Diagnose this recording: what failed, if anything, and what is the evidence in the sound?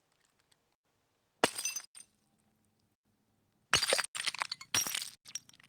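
A gap between chunks, at the playback or codec stage. Hard-edged silences of 100 ms cut the sound at 0.75, 1.85, 2.95, 4.05 and 5.15 s. They recur every 1.1 s, which is 1.0 s of audio and then a hole. Silence is left between chunks, but nothing is lost.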